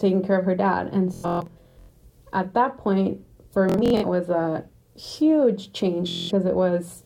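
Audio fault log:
1.14–1.90 s, 3.69–4.04 s and 6.09–6.31 s, Bluetooth stutter: packets arrived late or not at all, so the receiver looped its last short slice of audio, a buzzing machine-gun repeat. About 0.56 s, 0.21 s and 0.21 s went missing, and the sound resumes further on.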